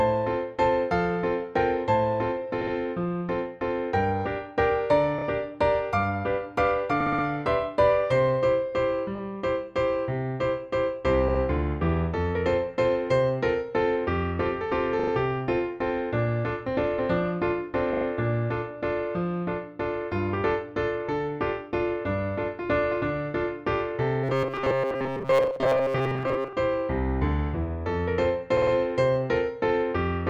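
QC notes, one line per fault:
2.61–2.73, 5.18–5.24, 7.00–7.24, 9.15–9.20, 11.28–11.40, 14.99–15.11, 17.93–18.05 and 28.57–28.72 s: repeated frames. A short block of 20 to 60 ms is played again two to four extra times, adding 40 to 240 ms each, worst at 7.00 s. The result is a stutter. Unlike the buzz below, the repeats are whole chunks of real audio at a slow rate, so no steady pitch forms.
24.24–26.54 s: robotic sound from repeated short buffers. For just over two seconds the sound turns into a rigid metallic buzz at 134 Hz, a period of about 7.5 ms. Most of the real audio in that stretch is skipped, while the outline of the sound is still loosely followed. The likely cause is a starved buffer of about that length being replayed. The cycle is too fast to hear as separate repeats, which sets it apart from the stutters.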